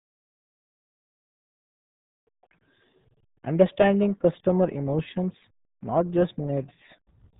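From start to finish the speech carries the signature of the RealAudio 14.4 codec, RealAudio 1, whose low bitrate points to an 8 kbit/s dial-up stream. Nothing survives above 3.8 kHz, so consonants lose their edge and the voice turns muffled, while heavy coding damage adds a gargly, watery smear to every syllable. On a spectrogram the energy stops at a flat ceiling near 3.8 kHz with blank space above, and harmonics look blotchy and smeared.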